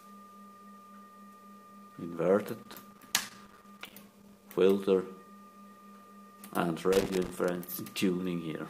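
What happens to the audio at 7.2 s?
At 7.2 s you're right in the middle of a burst of loose connector crackle running from about 6.93 to 7.73 s. A worn or dirty contact keeps making and breaking as it shifts, chopping the signal into an irregular, scratchy crackle for most of a second.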